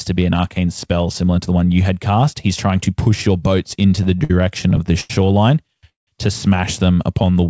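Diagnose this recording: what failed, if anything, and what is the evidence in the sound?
At the network and jitter-buffer stage, packets arrived late and the buffer repeatedly ran dry, causing repeated stalls (stutter). From 3.83 to 5.11 s there are 12 short holds, the longest 88 ms. From 5.68 to 6.08 s, four holds fill half the span, one lasting 176 ms, with the last sound stretched and faded.

The jitter buffer then slowed playback to rebuild its reserve, a jitter buffer slow-down. From 6.91 to 7.46 s it repeated single pitch periods or bits of pauses, adding 65 ms. The audio runs at 90% speed with unchanged pitch, so sounds are drawn out. Nothing is heard above 8 kHz, as expected for a wideband call codec.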